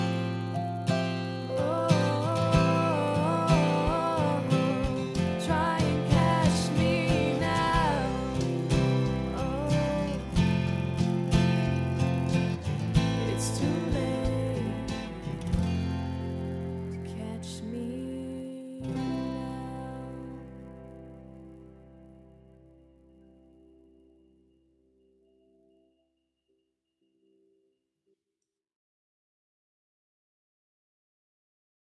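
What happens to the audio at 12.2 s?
At 12.2 s the audio carries a 100 Hz buzz caused by a resampler restarted on every block. The fault runs through the whole clip, not just this moment. The 48 kHz to 24 kHz conversion was run on 10 ms blocks independently, so at each block boundary the filter lacked the true neighbouring samples and left a small error. Those errors recur every 10 ms and fuse into a buzz that follows the signal and vanishes in silence.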